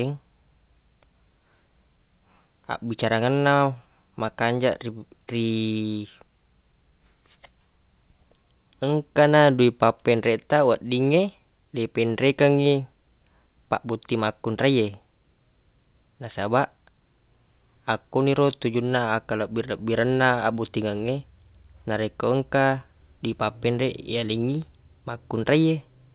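Speech carried over a narrowband call path, band-limited to about 4 kHz as fits G.711 A-law, with no technical faults heard.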